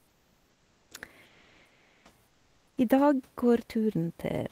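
Comfort noise in place of the background at 0.00 to 0.91 s, 1.25 to 2.05 s and 2.27 to 2.77 s: in these pauses the real room noise gives way to a steady, featureless hiss, about 5, 2 and 4 dB quieter, likely because the sender's discontinuous transmission stopped sending audio and the receiver synthesised a rough stand-in.

One channel drops out from 3.57 to 3.67 s: the speech abruptly falls by about 6 dB for roughly a tenth of a second, likely because one stereo channel was lost and only half the mono sum remained.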